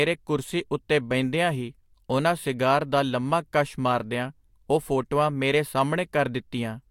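No technical faults are audible anywhere here.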